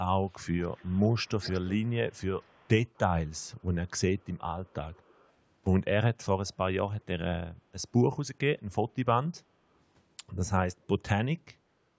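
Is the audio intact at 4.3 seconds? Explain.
No. From 4.19 to 5.31 s there is an echo leak: a faint, delayed copy of the speech trailing about 250 ms behind it, sitting far below the main signal, roughly 35 dB down. The likely cause is one side's loudspeaker whose echo canceller let some of the microphone pickup slip back into the call. Unlike room reverberation, which smears into a smooth decay, this is a distinct repeat at a fixed lag, heard only in this stretch.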